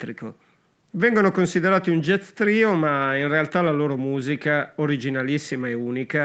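No technical faults can be heard in the speech, which carries only the ordinary traits of call microphone processing: the lowest bass is trimmed by its high-pass filter and nothing is present above 8 kHz.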